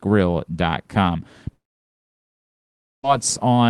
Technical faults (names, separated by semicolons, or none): long network dropout